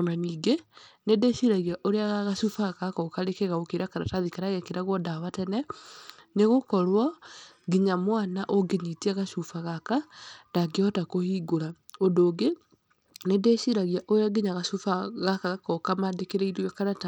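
Bluetooth SBC compression runs throughout this speech clip, from start to finish. The treble thins and flickers, with a gritty, aliased edge on the sound, which fits a low SBC bit pool near 96 kbps that starves the upper sub-bands. It is likely a Bluetooth link.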